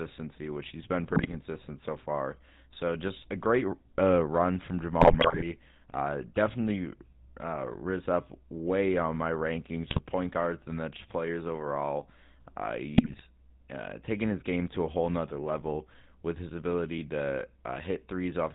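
From the start to the end, the speech carries the GSM full-rate codec's plainly audible damage, a buzzy, gravelly roughness that fits the 13 kbps full-rate coder. The codec rebuilds the vocal tract as a filter and excites it with a thinned, regularly spaced pulse train, so voiced sounds turn rasping. On a spectrogram everything above 4 kHz is empty, and harmonics look smeared and grainy rather than cleanly striated.

GSM bit errors strike four times: 1.10–1.35 s, 5.00–5.45 s, 9.90–10.00 s and 12.96–13.25 s. Corrupted filter, pitch and gain values reach the decoder, so the voice breaks into squawks, pops and gargling, longest at 5.0 s. The waveform shows sudden level spikes and collapses in 20 ms frame-sized steps, and the spectrogram shows abrupt vertical blocks of misplaced energy and bent formants.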